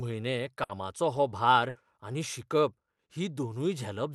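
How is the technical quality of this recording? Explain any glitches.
The speech carries six packet-loss glitches, all within the first two seconds, heard through an Opus call path whose top end stops near 12 kHz.

Lost packet rebuilt from error correction at 0.43, 0.69, 1.15 and 1.63 s: each 20 ms frame was played from a low-bitrate redundant copy, so it sounds briefly rough and noisy rather than dropping out.

Burst of packet loss at 0.63–0.71 s and 1.69–1.77 s: the receiver stretched the last sound over about 60 ms, fading it into a held buzz or hiss. Speech then resumes with 60 ms skipped.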